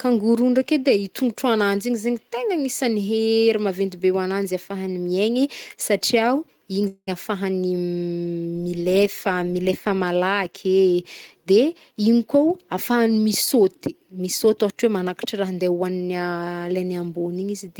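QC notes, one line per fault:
6.87–7.09 s, long network dropout: likely a stretch of packets that never arrived, so about 200 ms of the speech is gone. The receiver extends the last sound as a fading buzz, leaving roughly 50 ms of silence before the audio resumes past the gap.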